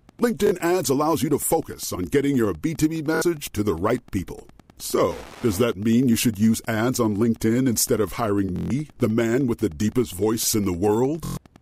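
Throughout the speech, Wi-Fi interference sits around 30 dB below the voice as a steady tick repeating every 102.4 ms, roughly ten times a second. A nearby Wi-Fi radio's beacon is being rectified by the audio circuit. Its strict, unchanging rhythm that ignores the speech separates it from mains hum, which is a continuous tone, and from random crackle, which has no regular beat.

Bluetooth stutter breaks in four times. At 0.47 to 0.52 s, just before "ads allows you to", about 46 ms is lost, which fits two dropped packets. At 3.15 to 3.22 s, before "to the right people", about 70 ms goes, consistent with three. Between "instead of hiring" and "the man with the", at 8.56 to 8.70 s, a 139 ms gap points to six. At 11.25 to 11.37 s, a 116 ms run sits within about 139 ms of disruption. In each case the receiver replayed its last short buffer, giving a buzzing machine-gun repeat. The speech then resumes further on, as though it had kept playing. 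That skip-ahead distinguishes it from a simple dropout to silence.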